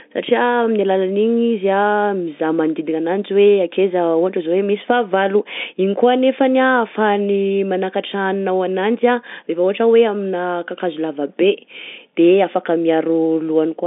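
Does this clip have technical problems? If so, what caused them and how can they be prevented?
No, nothing here needs fixing; it's ordinary telephone audio carried over a G.711 line, with the narrow band of roughly 150 Hz to 3.6 kHz you'd expect from a phone call.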